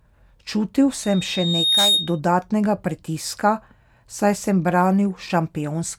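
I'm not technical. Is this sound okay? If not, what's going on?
No. A microphone was picking up the sound from a loudspeaker it was feeding, so the sound kept looping round and getting louder at one pitch. This is loudspeaker feedback squeal. From 1.03 to 2.20 seconds, a single high, piercing tone at about 3.7 kHz swells up over a little under a second until it rises somewhat above the speech, then stops.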